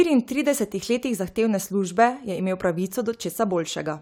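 No technical faults can be heard at any point in the recording.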